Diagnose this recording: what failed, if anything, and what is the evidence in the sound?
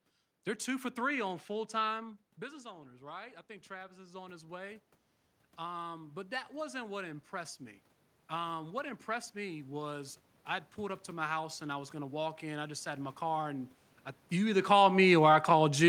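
Automatic gain rising, a call-processing fault, occurs twice. After "for three on full", the talker moves away around 2 s and the level drops by about 15 dB. From 1.96 to 4.91 s the gain climbs by about 7 dB, and again from 5.57 to 7.89 s by about 4 dB. The room noise swells along with the voice because the control scales everything together. A waveform shows the envelope and the noise floor ramping up together over seconds. A spectrogram brightens evenly across all bands.

Automatic gain falling, also in call processing, follows "my car and I". The talker moves again near 14 s. From 14.32 s to the end at 15.88 s, the control pulls its gain back gradually. The sound sinks, with the room noise dropping by the same amount. On a waveform the peaks taper over about one and a half seconds. A spectrogram dims uniformly across all frequencies rather than in a single band.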